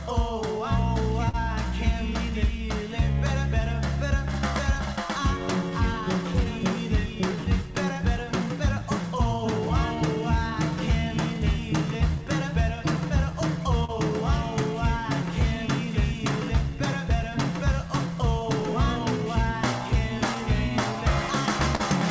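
Clock drift between sender and receiver runs through the whole clip. The sender's clock runs slow, roughly 3% behind the receiver's, so audio arrives a little more slowly than it is played out. The receiver's buffer keeps sinking toward empty and has to be refilled. The sound itself never breaks apart, but its timing is never quite steady. It passed through a call path whose content stops at 8 kHz, consistent with G.722 at 64 kbps.

Repeated timing corrections run from 0.58 s to 21.30 s. To make up for the slow sender, the receiver keeps stretching the audio by repeating tiny pieces, all in the same direction and at uneven spacing. Playback runs at 97% speed, and the stretches add up to roughly 0.7 s of extra material. No single edit stands out; at most they come across as slight hiccups or a slightly unsteady tempo.

Short stalls from a late packet occur at 1.29 to 1.36 s, 13.85 to 13.91 s and 21.75 to 21.82 s. 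Each time a packet was due but missing, the buffer ran dry, and the receiver held the last sound for 48 ms, 38 ms and 41 ms until the packet arrived. Nothing is lost because playback resumes from the same point. Each stall is heard as a brief frozen, slightly buzzy sustain or a small dip.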